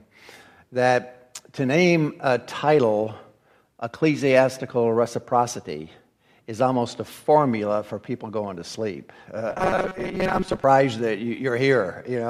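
From 9.51 to 10.64 s the audio turns into a rigid metallic buzz near 188 Hz. That is robotic sound from repeated short buffers, likely a repeated 5.3 ms chunk filling about half the time.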